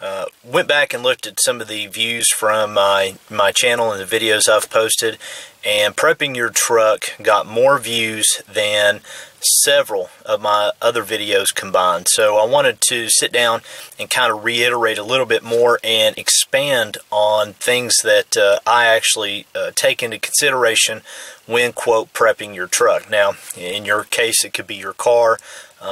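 No technical faults are audible anywhere in the recording.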